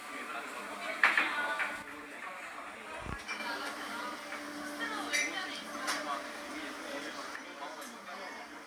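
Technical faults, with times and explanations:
1.82–3.40 s and 7.36 s to the end, one channel drops out: the level steps down abruptly by about 6 dB. The likely cause is one stereo channel going silent, halving shared content in the mono sum. The waveform shows a sudden amplitude drop, and the spectrogram dims evenly across all frequencies.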